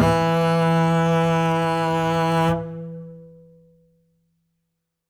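No technical faults can be heard anywhere in the music; the signal holds steady throughout without any interruption or damage.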